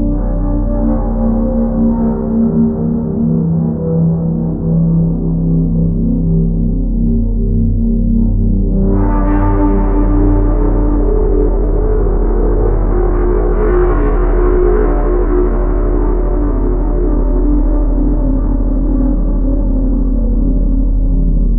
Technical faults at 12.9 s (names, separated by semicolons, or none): time-stretched section